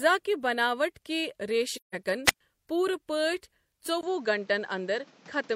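From 1.76 to 1.95 s, AAC frame loss with muting: the decoder zeroed a run of missing frames, which fits about four lost frames, leaving a soft-edged 0.17 s hole. From 2.25 to 2.41 s, a wireless microphone squelch dropout: the radio link faded, the receiver's squelch closed, and a brief burst of static gives way to about 0.11 s of near silence. At 4.01 s the input was likely switched to a poorer device. After a short silence of about 20 ms, the speech turns duller, with nothing above 7.8 kHz and a new, quiet background noise, at roughly the same level, until the end.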